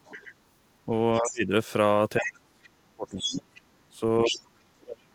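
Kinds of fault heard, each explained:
Other side's voice leaking through: a second voice sits under the speech at 0.04–0.34 s, 2.23–2.29 s, 3.09–3.61 s and 4.24–4.41 s, rising from roughly 20 dB below the talker to about 5 dB below. It is likely loudspeaker echo the canceller failed to remove.
Speech suppressed in double talk: the talker's level collapses at 0.86–1.52 s, 2.18–4.46 s and from 4.78 s to the end, dipping by roughly 25 to 35 dB. The likely cause is the echo canceller attenuating both during overlapping talk.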